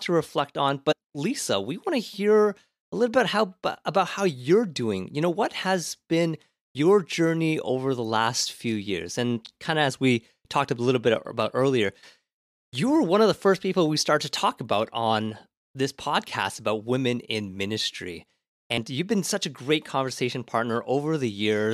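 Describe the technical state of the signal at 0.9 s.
Compressed frames are skipped from 0.91 to 0.93 s, just after "to reflect on". About four 23.2 ms frames are dropped. The speech jumps ahead roughly a tenth of a second.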